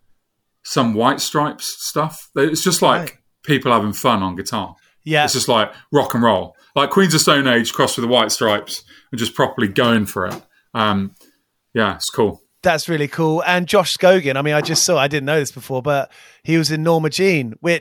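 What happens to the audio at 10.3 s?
A soft, fast rattle of ticks, roughly every 20 ms from 0.12 s to 17.80 s: clock slip clicks, single samples dropped or repeated, likely from unmatched device clocks.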